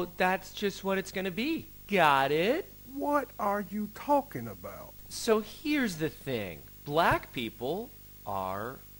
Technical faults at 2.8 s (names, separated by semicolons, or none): video or display buzz